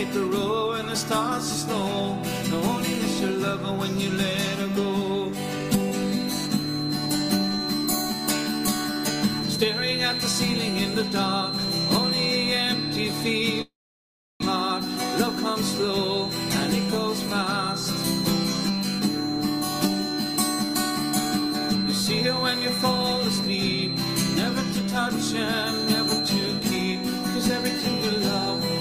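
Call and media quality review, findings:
Feedback whistle, 6.0 s to end of clip. Thin steady tone at 4.1 kHz, about 5 dB below the sound, swelling and fading slowly in level. Likely speaker-to-mic acoustic loop held just at the feedback threshold, one frequency ringing without running away.

Long network dropout, 13.61 to 14.44 s. Receiver extends the last sound as a fading buzz or hiss, then silence or low noise. Likely packet loss at the network path cuts about 600 ms, which is never recovered. Playback resumes past the gap, later by around 200 ms.

Jitter buffer speed-up, 20.12 to 21.85 s. Sound runs faster at unchanged pitch, about 103% speed. Receiver jitter buffer is overfull after bunched packet arrivals. It trims repeated pitch-period slices, roughly 70 ms in total, to reduce delay.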